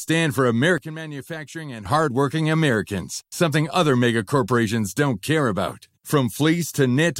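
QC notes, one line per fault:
0.78–1.86 s, sudden gain jump: the sound and its background noise drop together by about 12 dB, then return at once. The likely cause is a gain setting applied without a ramp. The waveform envelope steps down and back up, and the spectrogram darkens evenly across all frequencies with sharp vertical edges.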